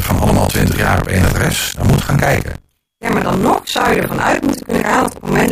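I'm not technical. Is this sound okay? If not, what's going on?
No. All the way through the speech there is a steady robotic buzz, about 47 times a second, caused by buffer tearing. The playback program and the sound hardware have fallen out of step. In each small chunk of audio, something like 40 percent is stale sound from roughly 40 ms earlier, spliced in with abrupt joins. The 47 Hz rhythm fits a 1024-sample buffer. The buzz sounds only while there is speech.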